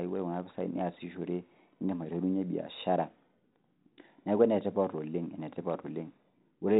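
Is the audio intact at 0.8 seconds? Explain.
Yes, at 0.8 seconds the speech is intact, with no fault at that moment; it is carried through 32 kbit/s G.726 ADPCM, as on a DECT cordless phone, which leaves only light coding damage.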